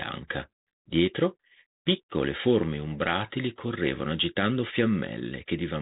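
Nothing stood out on listening to this speech clip, which comes through the 32 kbit/s G.726 ADPCM telephone path with only the narrow, band-limited character that path gives it.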